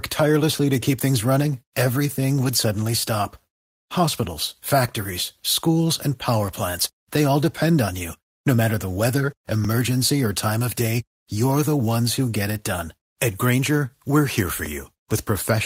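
At 2.43 to 2.49 s, just before "suddenly stop", there is a lost packet rebuilt from error correction: two packets went missing, and the decoder filled about 40 ms from the low-bitrate copies carried in the packets that followed. Nothing drops out, but that stretch sounds briefly rough and grainy. On a spectrogram the rebuilt frames look blurred and noisier than the frames around them, with less defined harmonic detail. In the waveform the envelope stays continuous, with no gap.

The same recovery happens at 4.23 to 4.25 s, leading into "factories schools and power", where a single packet was rebuilt over about 20 ms and produced a short patch of coarse texture.

At 4.63 s, also right before "factories schools and power", overlapping chunks produce a tiny stutter. The audio was handled in 2.5 s chunks, and each new chunk began about 7 ms before the previous one ended, so that 7 ms plays twice. 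It is heard as a click. The waveform shows a small discontinuity where the duplicated segment is spliced in, and the spectrogram shows a thin vertical broadband line. A second join does the same at 9.65 s.

At 10.49 to 10.51 s another single packet was lost and rebuilt from error correction over about 20 ms. That slice of sound turns hoarse, and on the spectrogram it shows as a short smeared, noisier band.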